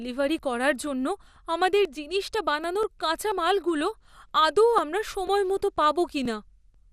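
A speech recording, likely squeezed through MP2 compression at a low bitrate, perhaps around 80 kbps, so nothing survives above 15.1 kHz and the voice sounds dull, gurgling and granular throughout. Periodic USB or driver dropouts, from a background task stalling the audio path, skip roughly 10 ms of sound every 0.49 s from 0.39 s to 6.74 s, giving about fifteen evenly spaced ticks.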